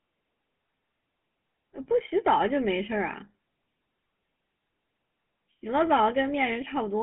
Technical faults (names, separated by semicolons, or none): GSM full-rate codec